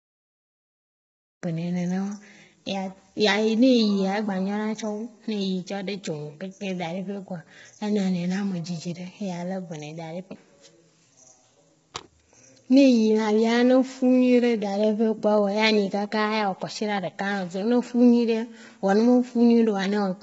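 The speech is rough and grainy throughout, with noise between the harmonics. Nothing sounds above 7.7 kHz. This is likely low-delay AAC compression, with damage heavy enough to fit a bitrate around 16 kbps.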